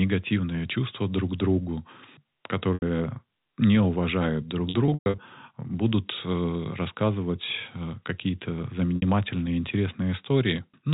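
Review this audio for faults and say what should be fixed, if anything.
At 2.74 s the sound briefly holds on a buzzy, repeated pitch for about 80 ms, and at 8.96 s for about 60 ms. Just after "не уважают друг", from 4.70 to 5.18 s, dropouts totalling 260 ms are scattered over 480 ms. The longest, 120 ms, fades toward silence before a cross-fade back. This is packet loss with pitch repetition: the receiver repeated the last pitch period to cover missing packets, which fits 20 ms packets. Forward error correction or redundant packets on the link would prevent it.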